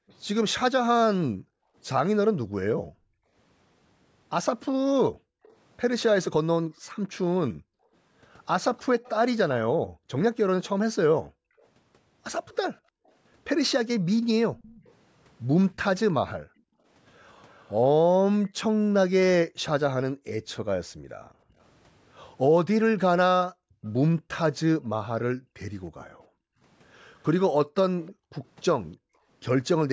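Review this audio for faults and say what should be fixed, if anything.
The room sound behind the speech keeps dipping and vanishing, then creeping back, from 0.0 s to 29.28 s, adding up to around seven seconds of gaps, with the deepest drops about 40 dB down. This is background gated by the echo canceller: whenever the far side played through the loudspeaker, the canceller clamped the microphone hard and released it afterwards, so the ambience pumps on and off. Softer, smoother suppression with slower release settings would prevent this.

A faint, delayed copy of the speech trails the talker from 8.77 s to 17.75 s and from 27.22 s to 28.65 s at about 30 dB below the speech, and appears as a brief scrap at 23.85 to 23.89 s at about 35 dB below, each time 315 ms late. This is an echo leak, likely from a loudspeaker-based endpoint whose echo canceller let part of the playback reach its microphone and sent it back. 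A headset or better echo-canceller tuning on that end would stop it.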